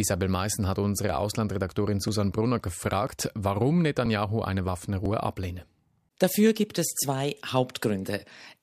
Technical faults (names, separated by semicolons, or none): overlap between stream segments